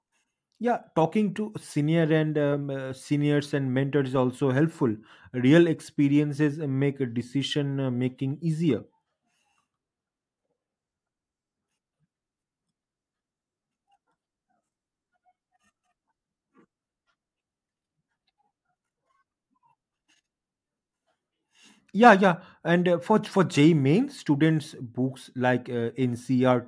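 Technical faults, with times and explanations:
No technical faults can be heard anywhere in this speech recording. There is nothing to list by time and nothing that needs explaining.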